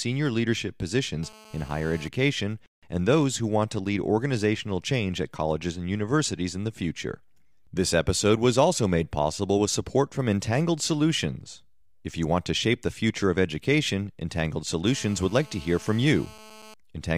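GSM phone buzz appears from 1.23 to 2.08 s and again from 14.87 to 16.74 s. A nearby 2G phone on a call transmits bursts about 217 times a second, and the audio circuitry rectifies those radio pulses into the signal. The result is a hard, raspy buzz at 217 Hz, rich in harmonics and unrelated to the speech, sitting about 23 dB below it and holding steady for each stretch.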